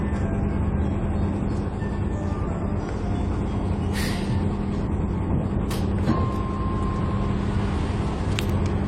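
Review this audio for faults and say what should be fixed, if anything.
Throughout, there is likely transcoding between lossy codecs: the sound has nothing above 16.1 kHz, with the artefacts of two stacked encodes heard together, which fits AAC-LC around 48 kbit/s followed by HE-AAC around 32 kbit/s. A spectrogram shows a hard shelf at 16.1 kHz and blurred, patchy upper bands. Encode once from the original source to avoid this.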